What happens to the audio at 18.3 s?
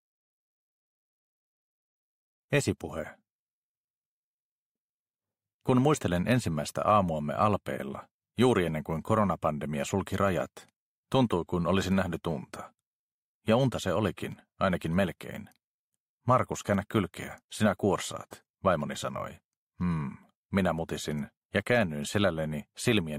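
Nothing goes wrong at 18.3 s, and the audio plays through that moment intact.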